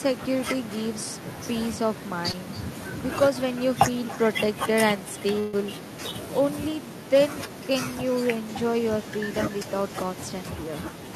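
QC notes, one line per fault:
Throughout: echo with no canceller. Every phrase of speech is trailed by a quieter, thinner copy of itself, sitting about 18 dB below the direct sound and arriving roughly a third of a second later. The far end is evidently playing the call through a loudspeaker, its microphone is picking that up, and nothing on that side is removing it, so the talker's own speech returns after the network round trip.
2.31 to 2.35 s: short concealed packet loss. About 20 ms of audio failed to arrive in time, and the receiver papered over the hole by extending the preceding sound for roughly 19 ms before crossfading back into the real signal. The result is a brief smear in the speech at that point rather than a dropout, since the fill carries on from what came just before.
5.39 to 5.55 s: burst of packet loss. Around 140 ms went missing in one run, and the receiver synthesised about 136 ms of continuation while lowering its level as the gap lengthened, which is why the sound there turns into a held, fading tail instead of cutting to silence. 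When real audio returns, it picks up further along, and the speech that fell inside the gap is simply absent.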